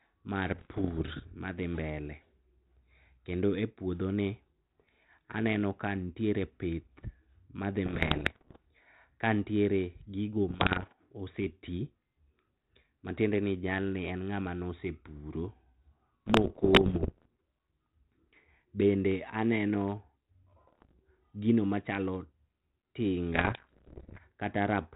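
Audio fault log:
0.48–1.24 s, 7.86–8.57 s, 10.48–10.92 s, 16.26–17.28 s, 20.67–21.00 s, 23.34–24.19 s: bit errors on an ADPCM link. Pops and rough bursts with brief level jumps end just before "madhi mbele" and "gino machalo". Flipped bits, on the order of one per hundred, derail the 32 kbit/s G.726 decoder's step size and predictor, so each error rings on for milliseconds.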